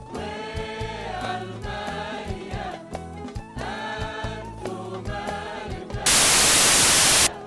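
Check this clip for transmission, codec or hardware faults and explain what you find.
One fault is present: file tags played as audio, from 6.06 to 7.27 s. A block of embedded metadata, here the compressed data of a cover picture, was read out as though it were sample values. Compressed data has no structure a waveform would have, so its bytes behave like random numbers. The result is very loud white noise lasting about 1.2 s. It starts and stops abruptly, with hard edges, like a sudden burst of static cutting into the audio.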